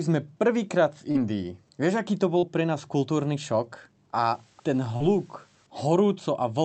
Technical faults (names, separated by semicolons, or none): short concealed packet loss; low bit depth with dither